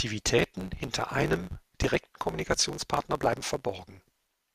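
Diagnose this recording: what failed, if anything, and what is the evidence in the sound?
A block size mismatch (truncated) runs from 0.37 s to the end of the recording, at the driver or buffer stage. A steady buzz at 100 Hz sits under the speech, and the talk runs about 1.16 times too fast while staying at roughly its normal pitch. One stage hands over blocks that fit a 512-sample size, the next reads fewer, and the tail of every block is dropped. Those regular cuts make the buzz and shorten time.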